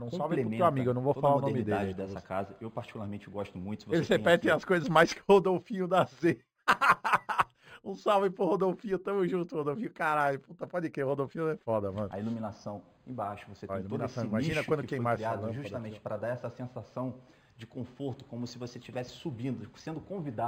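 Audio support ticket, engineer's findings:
Imaging from linear upsampling, whole clip. Dull top end, faint metallic shimmer on bright, hissy bits. Likely a cheap resampler stage: straight-line interpolation up to 48 kHz from what sounds like an 11 kHz source. Real content stops near 5.5 kHz. A mirrored copy fills 5.5 to 11 kHz, roughly 30 dB down. Weak filtering lets those images through.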